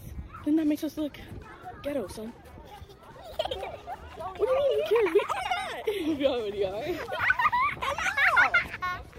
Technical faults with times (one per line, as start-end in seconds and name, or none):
0.00-5.96 time-stretched section